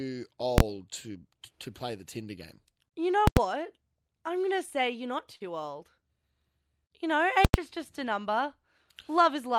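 At 0.58 to 0.60 s there is a single loud bang. This is invalid numbers at full scale. A calculation produced infinite or invalid values, and the output was forced to its largest value. The burst lasts about 23 ms, which fits a 1024-sample block. It is too short to hear as two separate edges.

The same fault returns at 3.27 to 3.37 s and at 7.45 to 7.54 s. Each of these blocks lasts about 93 ms, which fits a 4096-sample block. In both, a very loud pop marks the start and another marks the end. The speech vanishes in the gap between them.

At 5.35 to 5.42 s a short stall from a late packet occurs. A packet arrived late and the jitter buffer ran dry. The receiver held the last sound for 50 ms, then resumed from the same point. No speech is lost. A sound is drawn out with a slight buzz or dip, and the timing slips by 50 ms.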